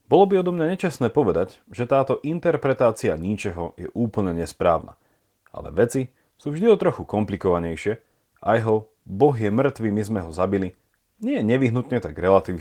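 Speech recording, and no technical faults are audible anywhere in it.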